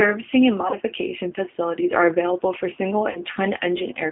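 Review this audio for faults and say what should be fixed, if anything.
The whole clip has the sound of the G.729 codec. The speech sits in a narrow phone band of about 150 Hz to 3.5 kHz, with a rough, slightly synthetic edge that fits an 8 kbit/s codec rebuilding the voice from a vocal-tract filter, a pitch predictor and a few pulses per frame. The damage is plainly audible. To avoid it, use a wideband codec such as G.722 or Opus on this link.

There are two spots of VoIP packet loss concealed by the speech codec. From 0.71 to 0.77 s, about 20 ms of audio went missing, which fits a single lost packet. From 3.11 to 3.23 s, about 40 ms went missing, which points to two packets in a row. In both places the decoder carries its last pitch and filter forward and fades them, so you hear a brief stretched, fading stretch. That stretch lasts longer than the gap itself, because the following frames take time to recover. 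Fixing the network loss, or adding redundancy or FEC, would prevent it.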